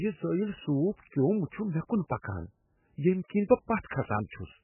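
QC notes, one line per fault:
Throughout, MP3 compression. The speech has nothing above 3 kHz and sounds heavily watery and swirly. The encoder dropped the treble to save bits, and weak frequency lines flicker between frames. This is likely an MP3 encode at a bitrate near 8 kbps.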